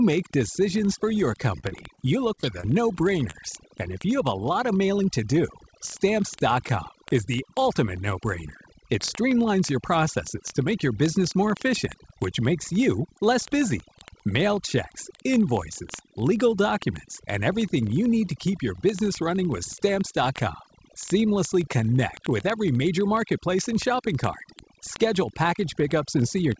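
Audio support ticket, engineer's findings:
Overdone noise removal, full clip: background pulled to near silence with twinkling specks. Noise suppressor set too aggressive, switching off bands near its noise estimate and taking low-level speech detail with them.

Word clock ticks, 0.1 s to end: sharp ticks of uneven strength at a steady rate of about one every 20 ms. Single-sample slips from an unlocked digital-link receiver, pointing to a clock error of roughly 0.1% against the sender.

Short stall from a late packet, 1.60–1.65 s: sound held about 29 ms too long, slight buzz or dip, no content lost. Jitter buffer ran dry. Receiver stretched the last audio until the packet landed, then resumed at the same point.

Short concealed packet loss at 1.69, 1.95, 2.35, 2.41, 2.61 and 3.31 s: brief smears or wobbles. About 20 ms of audio missing each time, filled with 16–23 ms of extrapolated sound and crossfaded back. 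Call-path concealment in the jitter buffer. Band limit at 8 kHz fits the G.722 codec at 64 kbps.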